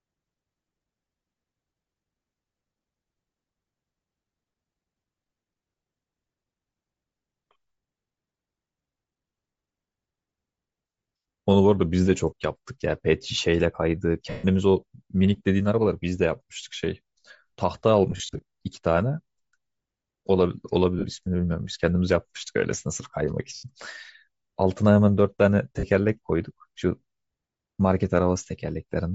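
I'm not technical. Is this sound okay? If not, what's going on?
No, not quite. The whole recording sounds plainly breathy and grainy, with the top end fuzzy rather than crisp. That's likely Bluetooth LC3 compression, the squeezing wireless earbuds and headsets do, which throws away much of the high detail and fills the gap with noise.

There are also five short glitches from lost LE Audio frames, where bits of the wireless signal dropped out. At 14.3 s (about 0.14 s long), 21.0 s, 23.5 s and 25.8 s, the speech briefly turns into a noisy smear as the receiver patches the gap with guesses based on the last bit it heard. Around 18.1 to 18.4 s it happens in several quick bursts.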